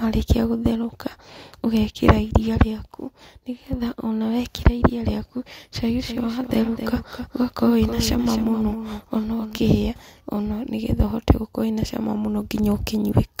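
A doubled audio track, likely from the signal being captured a second time along a slower path, runs through this speech from 5.82 s to 9.58 s: a dry, full-band copy trails roughly 300 ms behind at about 10 dB lower, switching in and out abruptly.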